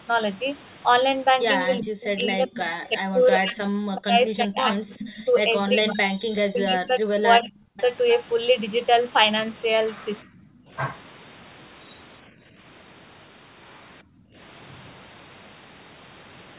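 Echo leak appears at 1.80–1.84 s and 7.78–7.82 s in this speech recording as a brief delayed copy of the speech, about 385 ms late and roughly 20 to 25 dB below it. The likely cause is a far-end loudspeaker whose echo canceller let part of its microphone pickup back into the call. Speech suppressed in double talk follows at 1.82–2.88 s, 3.10–6.06 s, 6.44–7.79 s and 10.22–10.39 s. The speech dips and breaks up, falling by as much as roughly 40 dB, likely because an echo canceller could not separate the talker from loudspeaker echo while both sides spoke and turned both down. Background gated by the echo canceller occurs at 12.32–12.55 s and 14.03–14.36 s. The room sound drops by about 9 dB and about 24 dB, then returns, because the canceller clamped the microphone while the loudspeaker played. Across all of this, the narrow telephone band tops out near 4 kHz.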